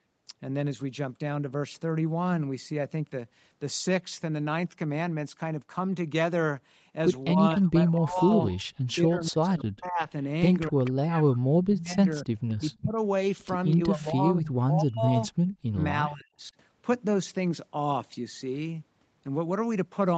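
A speech recording from a call, band-limited by the call's microphone processing so that nothing sits above 8 kHz, with two kinds of fault. Speech suppressed in double talk occurs from 7.34 to 10.08 s, 10.69 to 12.99 s and 13.77 to 16.54 s. In each stretch the voice is pulled down, by roughly 35 dB at the deepest point in the first and roughly 40 dB in the other two, for about 2 s, 1.5 s and 1.5 s of affected sound. The likely cause is an echo canceller that could not tell local talk from loudspeaker echo while both were present, and attenuated both. Echo leak appears at 8.48 to 8.63 s, 10.84 to 10.91 s, 12.49 to 12.77 s and 13.71 to 13.76 s as short scraps of a delayed copy of the far voice, trailing by 246 ms. They sit about 15, 20, 35 and 35 dB below the speech. This is likely residual loudspeaker pickup that the canceller failed to remove and sent back down the line.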